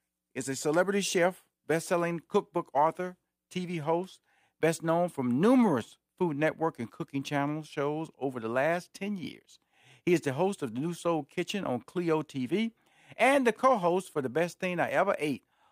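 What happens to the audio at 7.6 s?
Nothing goes wrong at 7.6 s; the speech there runs on without any break, click, dropout or change in level or tone.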